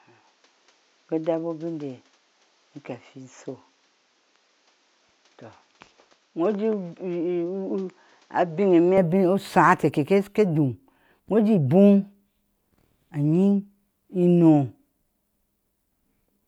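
The input was likely switched to a poorer device until 8.98 s, cutting everything above 7.6 kHz and lowering the level slightly with faint added noise. Fuller sound returns without a gap.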